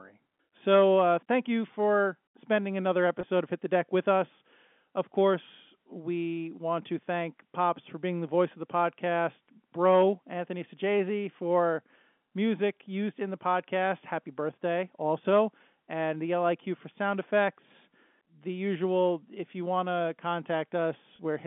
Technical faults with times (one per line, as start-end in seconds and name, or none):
3.21-3.23 packet loss with pitch repetition
9.89-13.73 channel delay (comb filtering)
21.16-21.19 packet loss with pitch repetition